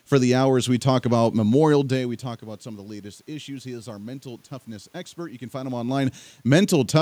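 No technical faults occur anywhere in the recording.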